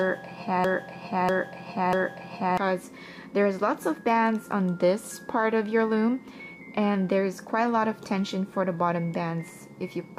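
From the very start to 2.57 s, the clip plays a broken-record loop that is already running when the audio begins: a 0.64 s fragment repeats exactly, back to back, three times. The likely cause is a stalled player, encoder or stream that kept resending the last piece it held, so the audio for that span is lost. Unlike an echo, nothing decays or overlaps, and unlike a stutter, each repeat is a full, identical 0.64 s chunk.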